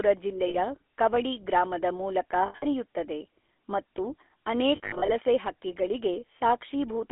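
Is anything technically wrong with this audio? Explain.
Yes. The whole clip has passed through the GSM full-rate codec. The audio sits inside a telephone band of roughly 300 Hz to 3.4 kHz, and the codec damage is plainly audible. The coder rebuilds the voice from a vocal-tract model driven by a sparse, regularly spaced pulse excitation, and that fits a 13 kbps full-rate coder. The result is a buzzy, gravelly grain on every voiced sound. A plain band-limited phone line would sound muffled but smooth. This roughness is what marks the codec.

There are also lost GSM frames at 0.48 to 0.56 s, 2.46 to 2.64 s and 4.76 to 5.11 s. When a frame goes missing, the decoder repeats the last good frame's settings at falling level. The first loss is about 60 ms and holds the sound as a short metallic ring. The later two are scattered, totalling about 140 ms over 160 ms and about 200 ms over 320 ms, with the longest gaps around 70 ms, so they flutter and ring. 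Ordinary packet loss gives clean silent gaps or clicks. Here the sound smears into a decaying, rough tone instead.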